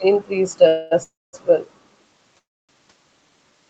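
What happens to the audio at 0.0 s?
At 0.0 s the audio is intact, with no fault to be heard at that moment.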